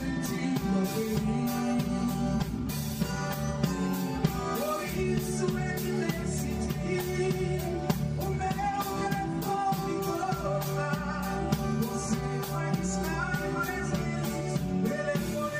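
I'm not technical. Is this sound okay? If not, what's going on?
No. Channel delay (comb filtering) runs throughout: one side arrives about five milliseconds late, and mixing both cancels evenly spaced frequencies, so it sounds hollow.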